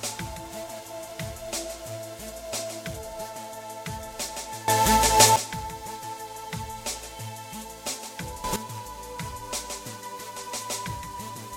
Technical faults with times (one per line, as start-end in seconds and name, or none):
4.68-5.36 sudden gain jump
8.44-8.56 sudden gain jump